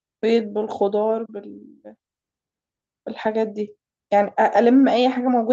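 No technical faults occur anywhere in the speech, so there is nothing to describe in time order.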